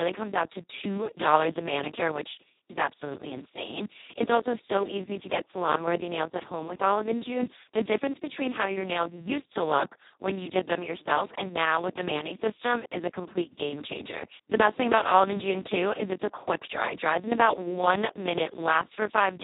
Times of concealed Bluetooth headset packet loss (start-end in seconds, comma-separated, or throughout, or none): none